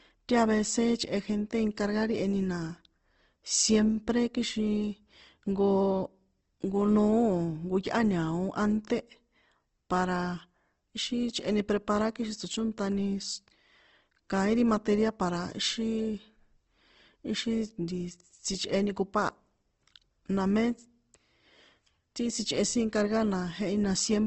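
A speech clip with plainly audible damage from start to finish: nothing comes through above about 8.2 kHz, so it sounds band-limited, and the voiced parts come out rough and grainy, with a noisy fizz where tone should be. That's likely Opus compression in its CELT music mode squeezed to a low rate, something like 16 kbps, filling starved bands with noise or folded copies rather than leaving holes.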